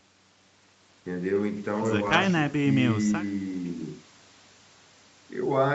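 No technical faults are audible.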